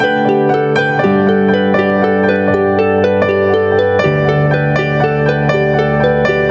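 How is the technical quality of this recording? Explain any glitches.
The recording has one fault, and it runs through the whole clip: gain pumping. The swing is around 5 dB. Loud and soft passages sit closer together, so the sound feels squashed. The likely cause is input gain set far too high, with a fast limiter or compressor pulling the level down whenever a loud sound arrives. The call's microphone processing is also audible as a bandwidth limit, with nothing above 8 kHz.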